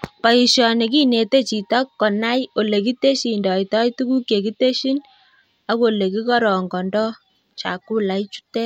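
No technical faults can be heard in this recording.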